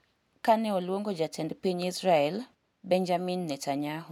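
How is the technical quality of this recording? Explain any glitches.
The recording's technical quality shows no glitches to explain.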